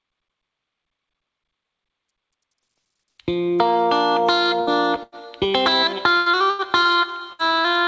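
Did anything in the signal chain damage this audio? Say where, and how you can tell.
Yes, the damage happened on the network side of the call, after encoding. There's a run of bursts of packet loss at 4.61–4.70 s, 5.03–5.15 s, 6.17–6.29 s, 6.50–6.62 s and 7.33–7.42 s. At each one the last bit of sound gets stretched into a held buzz or a fading hiss for about 60 to 90 ms. When the audio comes back, it has skipped ahead over a similar stretch. That's the receiver's concealment covering several consecutive packets that never arrived in time.

There's also one shorter hit, a short concealed packet loss at 6.83–6.88 s. It's more of a quick smear than a buzz. Only about 30 ms went missing, the decoder patched over roughly 24 ms of it by extending the preceding sound, and then it crossfaded back into real audio. It comes across as a brief wobble. The 8 kHz ceiling you hear throughout is just the call codec's band limit and isn't related to these dropouts.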